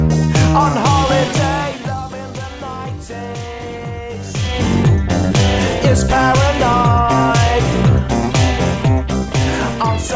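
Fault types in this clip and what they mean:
Nothing here calls for a fault entry, since none turn up anywhere in the clip.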